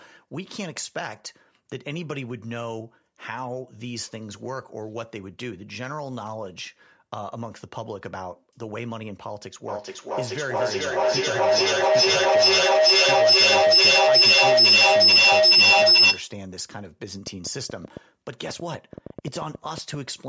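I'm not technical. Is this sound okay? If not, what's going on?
No. A feedback howl runs from 9.68 to 16.45 seconds: two devices in one room on the same call keep re-amplifying each other until a shrill whine near 5 kHz builds, with the loop coming round about every 0.4 seconds. Then a train of clicks runs from 17.27 to 19.95 seconds, about seven uneven ticks a second, likely from interference by nearby equipment or a faulty connection or power supply.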